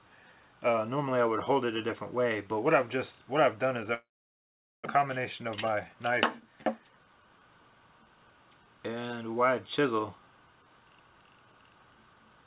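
Long network dropout, 3.94 to 4.88 s: the last sound is stretched into a fading buzz, which gives way to near silence for most of the gap of just over 0.9 s. When the audio returns, roughly 0.6 s of material is simply gone. The cause is likely a stall in packet delivery long enough for the receiver's concealment to run out. Afterwards the stream sits about 300 ms behind where it was.

Jitter buffer speed-up, 4.97 to 7.44 s: having built up that extra backlog, the receiver trims it away by cutting out short, pitch-period-sized slices again and again. This makes the audio run at about 112% speed for roughly two and a half seconds while keeping the same pitch, so this stretch sounds hurried and rushed rather than higher. In total, around 300 ms is removed, bringing the delay back down. Throughout, the G.711 mu-law call path leaves nothing above 4 kHz.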